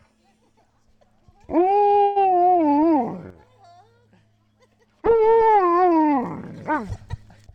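At 2.03 s the sound stalls into a call audio freeze: for about 124 ms, until 2.18 s, the last sound is held as a fading buzz or hiss, likely because delayed packets drained the jitter buffer. Unlike a dropout, nothing is lost; the audio resumes where it stopped, 124 ms later.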